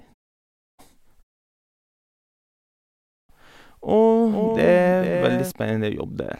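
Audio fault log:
4.27–5.51 s, doubled audio track: a second full-band copy of the speech runs roughly 0.4 s behind, around 5 dB quieter, with no decay or room colour, and cuts in and out abruptly, likely from a slower capture path or an edit holding two misaligned copies.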